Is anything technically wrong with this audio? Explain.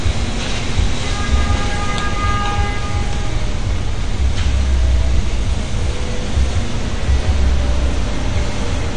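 Yes. Throughout, the sound is dull and smeared, with nothing above 9.7 kHz and a warbling, fizzy texture on sustained and hissy parts. This is likely AAC compression at a low bitrate, around 32 kbps, where the encoder drops the top band and coarsely quantises the rest.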